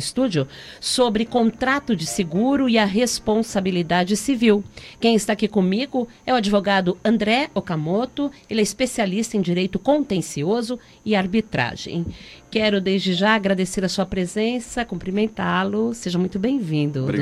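No faults can be heard anywhere in the audio.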